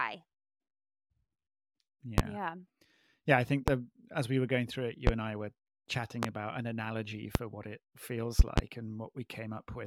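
Sharp loud pops cut through the speech at 2.18, 3.68 (after "I think"), 5.07 (after "were going through it"), 6.23 (before "about an analogy") and 7.35 s, each about 25 dB above the speech, with the talking continuing underneath. At 8.39 to 8.61 s a double pop occurs. The likely cause is brief voltage steps, from a connector, switch, static or driver glitch, entering the signal chain and being shaped into short thumps.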